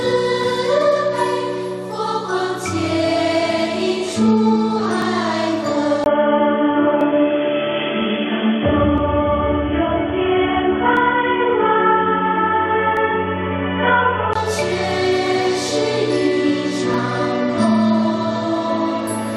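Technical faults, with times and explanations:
5.02, 7.01, 8.98, 10.97, 12.97 and 16.94 s: overlap between stream segments. The stream is cut into segments about 2 s long, and at these boundaries the time stamps of neighbouring segments overlap. The player trims the supposed duplicate, but that audio was never actually repeated, so a few milliseconds of real sound are discarded. The waveform jumps across the gap, producing a small click or skip that recurs at roughly 2 s intervals.
6.04 to 14.35 s: input switched to a poorer device. The input most likely changed mid-recording to a lower-grade microphone or a headset call profile, and changed back again at 14.35 s. A gap of about 20 ms marks the switch. The replacement path passes nothing above 3.4 kHz, so the sound turns dull and boxy, and it adds a faint noise floor of its own, roughly 55 dB below the signal. The loudness stays about the same.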